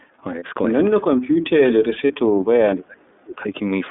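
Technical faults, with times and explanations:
Throughout: iLBC codec. The speech sits in a band of roughly 200 Hz to 3.6 kHz, and each frame is coded independently, which leaves it slightly rough and synthetic. The 30 ms framing fits the 13.33 kbps mode. A spectrogram shows nothing above 3.6 kHz and blurred harmonics.
0.39 s and 2.07 s: lost iLBC frames. At each point about 30 ms of audio goes missing. The decoder fills the gap by repeating the last pitch cycle with added noise, which sounds like a brief buzzy held vowel. The waveform shows a short run of near-identical periods, then clean recovery.
1.22–3.42 s: speech suppressed in double talk. Over about two seconds the voice dips, thins and drops out in pieces, with the deepest cuts around 40 dB. This is likely an echo canceller turning the talker down while the far side spoke. The waveform envelope shows deep, ragged notches.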